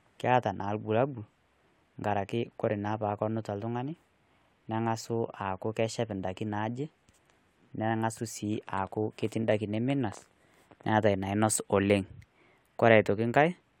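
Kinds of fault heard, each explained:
No technical faults are audible anywhere in the speech recording.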